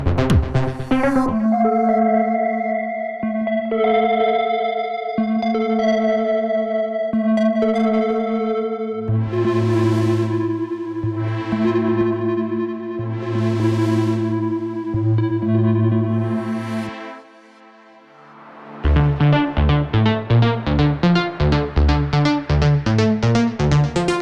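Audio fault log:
No faults were found anywhere in the clip.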